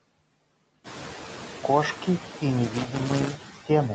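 Noise suppressor artifacts run through the whole clip. The suppressor estimates the steady background and pulls those bands down by about 15 dB frame by frame, so the room noise that comes up around 1 s sinks in pauses and swells back under the speech.

Loose connector crackle runs from 2.64 to 3.58 s. A worn or dirty contact keeps making and breaking, chopping the signal, heard as an irregular burst of scratchy crackle over the speech.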